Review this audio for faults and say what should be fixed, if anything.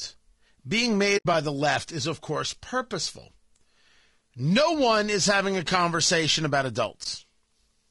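The speech sounds rough and grainy throughout, with noise between the harmonics. This is likely low-delay AAC compression at a bitrate near 32 kbps. Raising the bitrate would prevent it.

AAC frame loss with muting leaves a soft-edged hole from 1.17 to 1.26 s, just before "by the left is", and a brief dip from 7.03 to 7.06 s, just after "conversation about". The decoder zeroed the lost frames, and the overlapping windows fade the sound out and back in. Packet-loss concealment or redundant transmission would prevent this.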